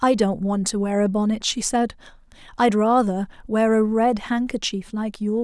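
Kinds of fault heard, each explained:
No technical faults can be heard in this speech.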